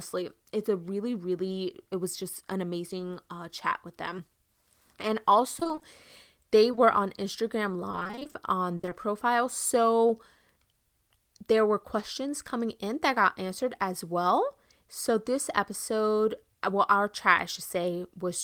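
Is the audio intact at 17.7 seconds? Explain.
Yes, at 17.7 seconds the speech plays through intact, with no audible fault at that moment.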